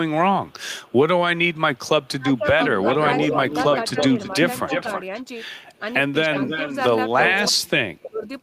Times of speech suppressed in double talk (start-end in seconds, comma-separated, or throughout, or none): 2.19-3.39, 3.92-5.13, 6.25-6.45, 7.43-8.26